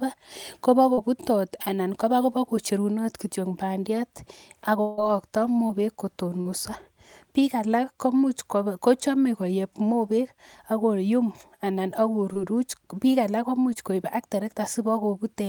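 Speech with brief glitches from short concealed packet loss at 0.93–0.99 s, 5.67–5.71 s, 6.41–6.47 s, 12.33–12.37 s and 13.73–13.77 s, each 20 to 40 ms of missing audio filled by stretching the preceding sound. They register as small smears or wobbles, and a spectrogram shows harmonics or noise frozen flat across each gap. From 4.81 to 4.99 s, about 160 ms of audio is replaced by a continuation of the last sound that fades without reaching silence, so on a waveform the speech tails off smoothly and then resumes without what was lost. The likely cause is a long network dropout.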